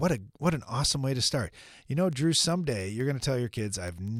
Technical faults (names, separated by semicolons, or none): word clock ticks